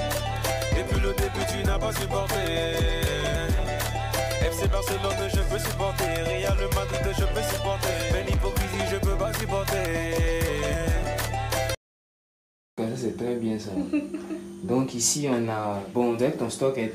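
Something, likely electrical interference or a faulty connection or power supply, injects a train of clicks from 10.58 to 11.45 s. About seven similar pulses arrive unevenly, roughly 5.8 per second, each peaking near the level of the sound itself, heard as a burst of sharp ticking.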